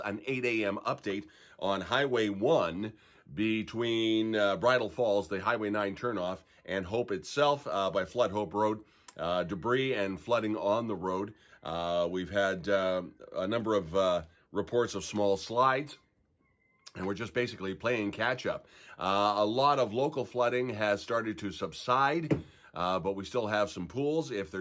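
No technical faults can be heard anywhere in the audio.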